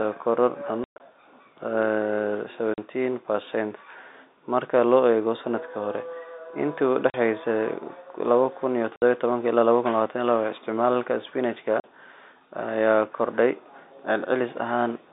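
Packet loss filled with silence cuts the speech at 0.84 to 1.0 s, then at 2.74, 7.1, 8.96 and 11.8 s. The gaps run 40 to 120 ms, with 140 ms lost in all at the first cut, which fits 20 ms packets. Each hole drops to dead silence with hard edges.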